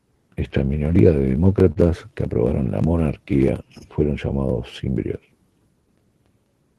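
At 1.72 to 1.78 s, just before "que aprobaron la", there is a short stall from a late packet. A packet missed its playout time and the jitter buffer ran dry, so the receiver held the last stretch of speech for about 40 ms rather than dropping anything. Playback then resumed where it left off, now running roughly 40 ms later. The result is a briefly prolonged sound with a faint buzzy, slightly sagging quality.

From 3.24 to 3.64 s, after "que aprobaron la", the jitter buffer slow-down appears. To rebuild its reserve, the receiver repeated individual pitch periods and fragments of pauses back to back, adding about 37 ms over this span. Speech runs at roughly 93% of normal speed with pitch unchanged. Sounds stretch out. All of this passes through the call codec, which the sound points to as Opus at around 20 kbps, with content above 12 kHz cut off.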